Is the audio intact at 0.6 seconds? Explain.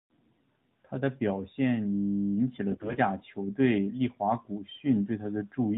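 Yes, at 0.6 seconds the speech is intact, with no fault beyond the narrowband sound of the AMR narrowband mobile codec that runs through the whole clip.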